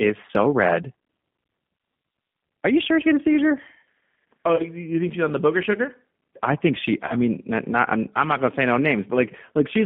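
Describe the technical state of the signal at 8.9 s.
At 8.9 s the speech is still under G.729 codec coding, which covers the whole clip. The sound is confined to roughly 150 Hz to 3.5 kHz, and within that band it is rebuilt from a vocal tract filter, a pitch predictor and a few pulses per sub-frame. The result is a plainly rough, slightly synthetic sound that points to an 8 kbit/s coder. Simple telephone band-limiting would sound muffled but smooth, without this grainy, resynthesised texture.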